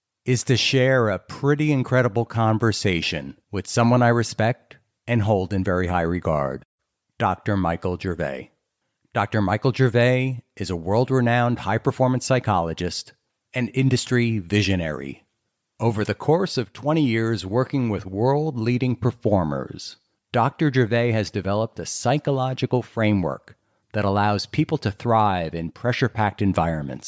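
No technical faults can be heard anywhere in the speech recording.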